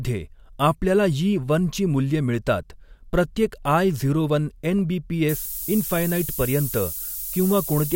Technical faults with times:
5.29-7.96 low bit depth with noise shaping

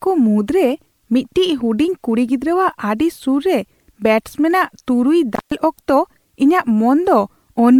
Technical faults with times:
0.00-7.79 generation loss
5.34-5.52 intermittent contact

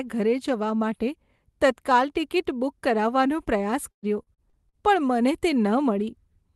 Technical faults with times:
3.91-4.76 repeated packet loss (robotic sound)

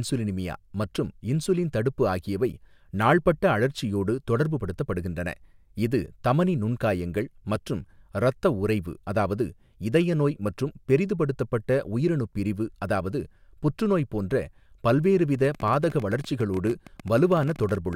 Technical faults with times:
15.35-17.94 train of clicks

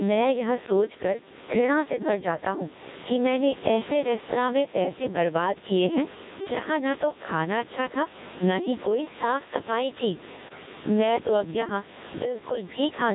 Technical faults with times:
0.00-13.14 gain pumping
0.00-13.14 Codec 2 vocoder
10.48-10.66 bit errors on digital voice radio

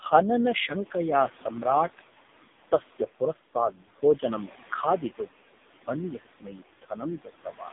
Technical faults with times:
0.00-7.73 noise suppressor artifacts
0.00-7.73 AMR narrowband mobile codec
3.53-4.03 speech cut by the noise suppressor
5.16-5.40 speech cut by the noise suppressor
6.20-6.92 speech cut by the noise suppressor
7.19-7.72 speech cut by the noise suppressor

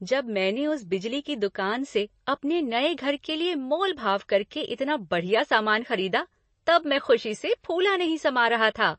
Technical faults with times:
0.00-8.98 MP3 compression

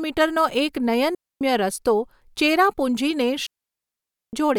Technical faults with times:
1.15-1.41 digital wireless dropout
3.46-4.33 digital wireless dropout

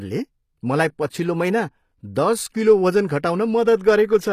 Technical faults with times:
0.00-4.33 HE-AAC compression

